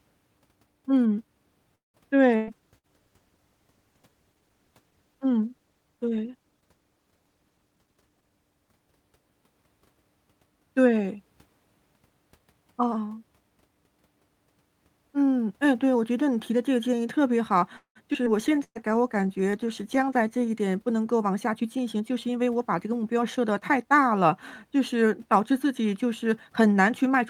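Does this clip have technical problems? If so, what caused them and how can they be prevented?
Yes. Repeated packet loss (robotic sound) from 1.75 to 2.89 s: three gaps, the longest 186 ms, are patched by stretching earlier sound. The result is choppy rather than one clean dropout. Better network routing or stronger forward error correction would prevent it.

Call bitrate drops from 2.5 to 10.14 s (64 to 18 kbps) and 18.40 to 21.65 s (64 to 22 kbps) make the sound watery and muffled but keep it continuous. A steadier bandwidth would prevent them.

Jitter buffer speed-ups at 7.50 to 8.31 s (117%, about 150 ms removed), 12.39 to 12.88 s (108%) and 21.18 to 24.01 s (106%) hurry the speech without raising its pitch. Gentler delay reduction would prevent them.

A call audio freeze from 17.77 to 17.98 s adds a 186 ms pause, 100 ms of it silent, and then resumes with nothing lost. The likely cause is held-up packets that emptied the jitter buffer. 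A larger reserve of buffered audio would prevent it.

Skip aheads at 18.13 and 18.26 s each jump forward, dropping around 70 ms with almost no gap, rather than pausing like the freeze. Avoiding buffer overflow would prevent them.

A jitter buffer slow-down from 18.49 to 20.47 s (94%, 128 ms added) draws sounds out at the same pitch. Keeping the buffer from running low would prevent it.

A burst of packet loss from 18.64 to 18.78 s holds the last sound and turns it down, then 50 ms of silence, and 120 ms is missing. Unlike the freeze, audio is lost. Error correction would prevent it.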